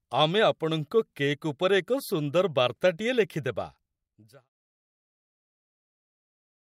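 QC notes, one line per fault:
No faults found.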